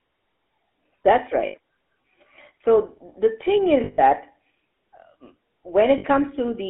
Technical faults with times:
0.00-6.70 GSM full-rate codec
1.46-1.56 lost GSM frames
3.84-4.00 lost GSM frames
5.98-6.05 lost GSM frames

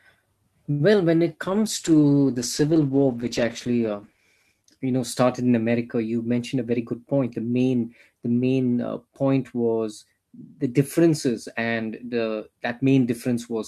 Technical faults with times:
0.71-0.82 short stall from a late packet
1.47-6.27 call bitrate drop
6.38-7.41 jitter buffer speed-up

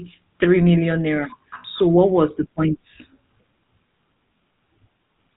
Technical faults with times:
0.00-5.36 GSM full-rate codec

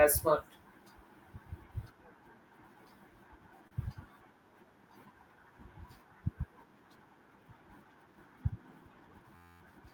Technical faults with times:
3.67-3.86 short stall from a late packet
9.35-9.61 system hang loop

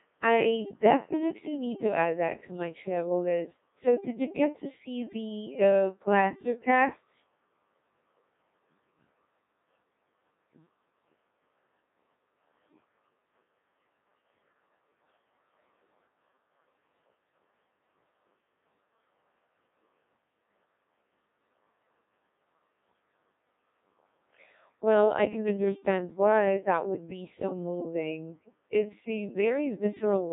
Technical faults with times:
0.00-30.33 Codec 2 vocoder

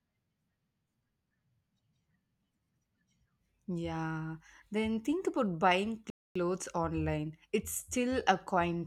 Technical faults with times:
6.10-6.35 playback stall

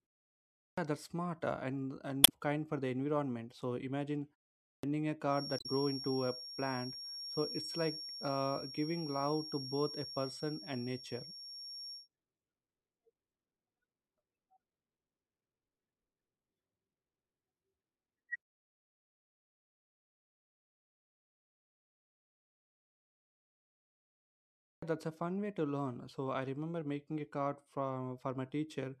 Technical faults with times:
0.64-0.78 clipped start after a pause
2.24-2.30 damaged data in a compressed stream
4.70-4.83 clipped start after a pause
5.25-12.09 feedback whistle
5.57-5.66 damaged data in a compressed stream
24.70-24.82 clipped start after a pause

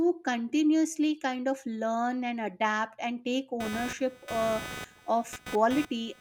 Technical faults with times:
3.60-6.20 computer activity noise

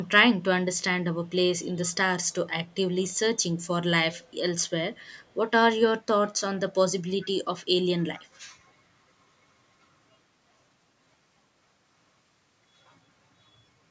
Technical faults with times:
0.04-0.09 echo leak
1.26-1.30 echo leak
1.85-2.33 echo leak
2.67-2.75 echo leak
3.11-3.67 echo leak
4.19-5.35 echo leak
7.21-7.27 echo leak
8.15-8.24 echo leak

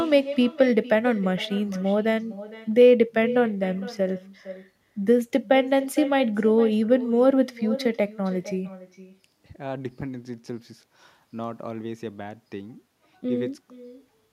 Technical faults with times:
0.00-14.33 echo with no canceller

